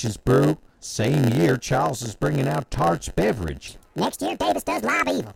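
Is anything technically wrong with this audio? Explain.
Yes, there are two faults in this speech clip.

A block size mismatch (padded) runs through the whole clip. One stage writes shorter blocks than the next stage expects, and the remainder of each block is filled with silence. Those tiny regular gaps make a buzz at about 91.9 Hz and stretch the speech to 0.919 times its proper speed, but the pitch stays natural. That sets it apart from a plain slowdown, which would lower the pitch along with the tempo.

From 3.68 s to the end of the clip, a section plays at the wrong speed: 1.6 times too fast. Pitch rises with tempo, by roughly seven semitones, so the voice turns high and hurried. That pairing is what separates it from time-stretching, which changes tempo but keeps the pitch. The likely cause is that this stretch was played or edited against the wrong clock rate.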